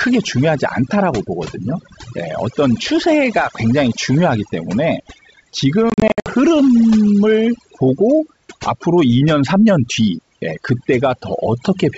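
Overdone noise removal runs throughout. A noise reducer set too strong pushes individual frequency bands far down or off whenever they sit near its noise estimate, taking quieter parts of the speech with them. The background is lowered and broken into twinkling, warbling specks.

Packet loss on an ADPCM call occurs from 5.90 to 6.29 s. About 220 ms of audio drops out in hard-edged silent gaps spread over roughly 360 ms, the longest lasting 60 ms, which points to around ten lost packets. Because the decoder's adaptive predictor and step size fall out of step with the sender's, the speech comes back distorted after each gap before settling within some tens of milliseconds.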